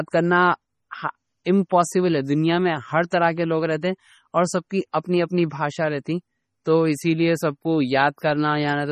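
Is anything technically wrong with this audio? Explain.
Yes. The speech carries heavy MP3 compression damage throughout, likely from encoding at a very low bitrate, around 32 kbps. Weak frequency lines drop in and out between frames, so the sound is watery and swirly with chirpy sibilants. A spectrogram shows flickering holes in the frequency content.

A pre-echo occurs at 3.10 s, between "دنیا میں ہر" and "طرح کے لوگ رہتے". The codec spread its quantisation noise across the whole block, so about 15 ms of hiss precedes the onset and blurs it. The waveform shows a noise smear just ahead of the attack.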